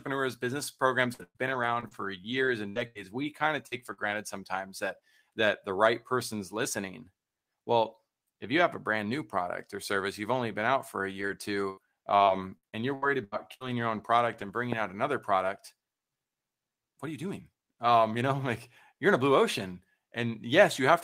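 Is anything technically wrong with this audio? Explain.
Yes. Two stretches show repeated packet loss (robotic sound), and there is one loud pop.

From 1.13 to 4.14 s, after "business programs" and before "sometimes that that the", the speech breaks up. About ten holes appear, the longest 117 ms. Each is patched by stretching the previous sound, so roughly 16% of the stretch is synthetic. The result is choppy, with pieces missing.

From 11.10 to 14.50 s, after "been out for a", it happens again. There are about nine gaps, the longest 81 ms, covering about 14% of the span. The same robotic, clipped texture returns before "bringing out another product".

At 14.73 to 14.75 s, just before "out another product", a single loud pop cuts in, about 15 dB above the speech. The speech continues underneath. A brief voltage spike from a switch, plug or static discharge is the likely cause.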